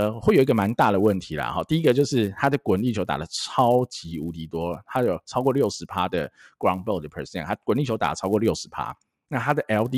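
A steady buzz at 100 Hz rides under the speech for the whole clip and drops away in pauses. The resampler was restarted on every block, so each 10 ms block's edges carry a small error, consistent with upsampling from 24 kHz to 48 kHz.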